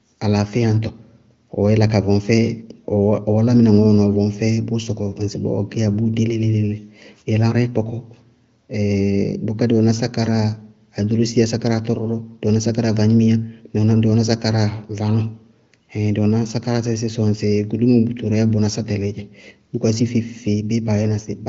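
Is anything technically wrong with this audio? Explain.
No, no faults are audible.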